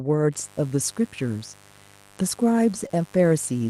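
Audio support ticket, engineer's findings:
Mains buzz, 0.32 s to end: unshielded line or switching load injecting 50 Hz spikes twice per cycle, harmonics into the kilohertz range. Steady raspy buzz about 30 dB below the speech. Check grounding and shielding.

Short concealed packet loss, 2.87–2.91 s: about 20 ms of audio failed to arrive, roughly 18 ms extrapolated from preceding sound, then crossfaded back. Brief smear in the speech at that point. Check network jitter and buffer.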